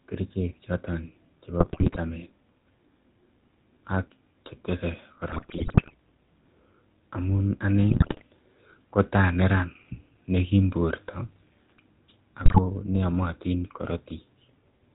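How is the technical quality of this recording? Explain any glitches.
The technical quality is poor: the whole recording carries telephone codec damage, and four short bursts of corrupted audio break through it.

GSM full-rate codec: the speech was squeezed through the original GSM coder, plainly audible here. It discards everything above 4 kHz and simplifies the excitation, leaving a muffled, buzzy, gravelly roughness.

GSM bit errors: at 1.6 to 1.98 s, 5.3 to 5.94 s, 7.9 to 8.23 s and 12.44 to 12.59 s, corrupted bits scrambled the decoder's filter, pitch and gain values, producing squawks, pops and gargling.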